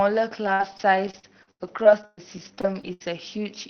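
From 0.45 to 3.04 s, the speech breaks up with repeated packet loss and a robotic sound. Short holes keep appearing, the longest about 116 ms. Each is patched by stretching the last sound, so roughly 0.4 s comes out choppy.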